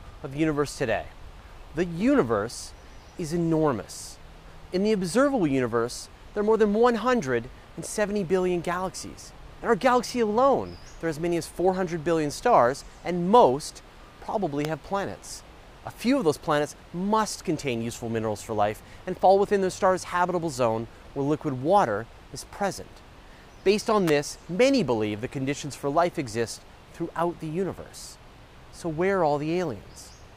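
Electrical switching spikes occur at 14.65 s and 24.08 s, each a sharp, brief snap laid over the sound. The first is a single instant peaking at roughly -15 dBFS. The second lasts a little longer and is louder, at roughly -10 dBFS. The likely cause is a nearby switch, motor or static discharge arcing, with the audio line picking up that burst of electrical energy as an impulse added to the signal.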